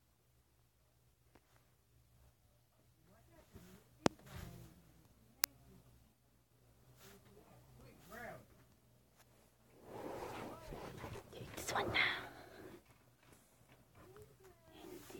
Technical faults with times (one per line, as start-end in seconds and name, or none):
5.44 uninitialised buffer